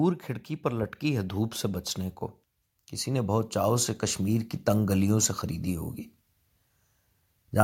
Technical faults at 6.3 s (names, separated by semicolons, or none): none